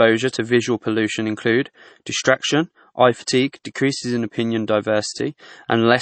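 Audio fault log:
Throughout: low-bitrate audio saved at a high bitrate. The speech has nothing above about 8.3 kHz, so the top end is just gone and it sounds dull. That's likely a low-bitrate MP3 pass, something around 32 kbit/s, later re-saved as a much larger MP3, roughly 192 kbit/s. The bigger file can't bring back what the first encode threw away, so that cut-off and the first encode's artefacts stay baked in.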